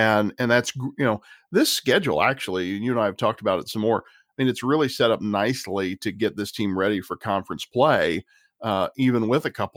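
No technical faults can be heard anywhere in this speech recording.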